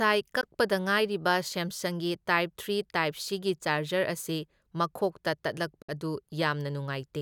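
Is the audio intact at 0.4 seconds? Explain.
No. From 0.41 to 0.45 s the speech cuts to silence, then resumes further along, as if it had kept playing underneath. This is likely a Bluetooth dropout, where audio packets missed their deadline at the headphones, which fits a single lost packet.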